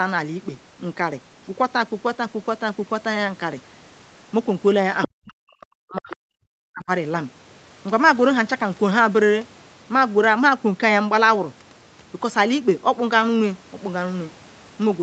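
At 5.02 s a brief scrap of a second voice, the other side's voice leaking through, sits roughly 10 dB under the talker for about 60 ms. This is most likely loudspeaker playback reaching the microphone that the echo canceller failed to remove. A second, quieter leak of the same kind appears at 6.10 to 6.16 s, around 15 dB down. Both are short, more like a fragment bleeding in than a continuous echo.

From 5.07 s to 6.42 s the talker's speech is suppressed in double talk. The level drops by as much as about 40 dB, affecting around a second of speech. The likely cause is the canceller treating the overlap of both parties as echo and ducking everything. A shorter drop of similar depth follows at 6.66 to 6.89 s, affecting roughly 0.2 s. Throughout, the Opus call path limits the audio to an 8 kHz bandwidth.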